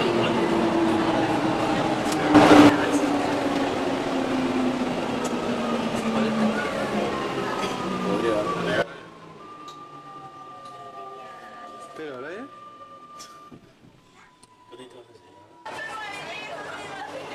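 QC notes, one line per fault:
2.35–2.69 s: sudden gain jump. A gain change, likely applied without a ramp, lifts the level by about 11 dB for roughly a third of a second. Sound and background noise rise and fall together at hard edges.
8.82 s to end: sudden gain jump. The level drops by about 15 dB in a single step and stays down, likely a setting switched instantly. Sound and noise floor fall at the same moment.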